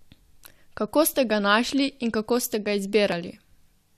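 Right after "kako ste ga", at about 3.12 s, the speech briefly skips forward. That's an overlap between stream segments. Two neighbouring chunks, which look to be about 2.0 s long, claimed the same stretch of time, so the player discarded the overlap as a duplicate even though that sound only existed once. A few milliseconds vanish, and the waveform jumps straight across the gap.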